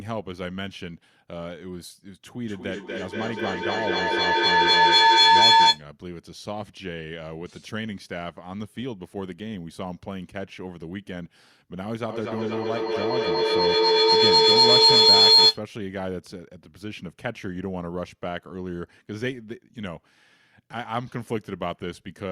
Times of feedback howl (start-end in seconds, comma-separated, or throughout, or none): 2.45-5.87, 12.09-15.65